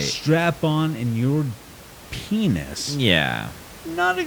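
No technical faults can be heard in this speech recording, and the only other sound is a low bed of room noise about 20 dB below the speech, which comes from the space around the microphone rather than from the signal path.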